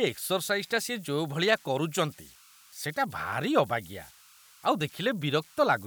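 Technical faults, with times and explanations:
Throughout, converter idle tones: a whistle sits around 1.5 kHz, most audible in the pauses between phrases, with a grainy texture under the quieter speech, at about 28 dB below the signal. An undithered delta-sigma converter settles into repeating bit patterns whenever its input is small, and those cycles produce tones rather than smooth noise. The tone's pitch depends on the input's offset.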